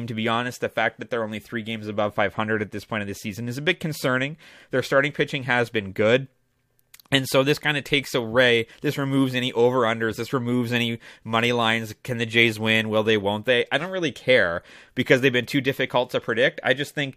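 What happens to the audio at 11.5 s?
At 11.5 s the speech runs on intact, with no dropout, click, distortion or other fault at that point.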